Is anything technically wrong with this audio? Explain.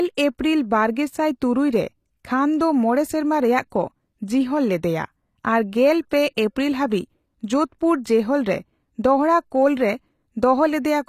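Yes. Throughout the speech, sibilants sound gritty and lispy, likely from HE-AAC compression at a rate fitting 24 kbps. The spectrogram shows patchy, copied-looking treble that stops at 14.9 kHz.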